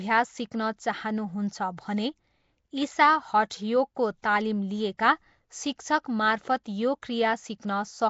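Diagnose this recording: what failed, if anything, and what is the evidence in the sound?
Codec stage: the speech is rough, hissy and smeared throughout, with nothing above 7.7 kHz. This is likely Nellymoser compression filling bit-starved bands with noise.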